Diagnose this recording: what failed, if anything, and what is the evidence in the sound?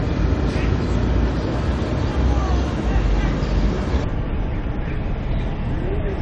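Playback failed from 4.04 s to the end at 6.22 s. That stretch is a wrong sample rate. The sound suddenly runs at half speed and drops a full octave, 12 semitones lower. Pitch and tempo fall together by the same factor of 0.5, with no conversion to compensate. That points to a playback clock near 22 kHz reading material captured at 44.1 kHz. Every sample lasts twice as long as intended.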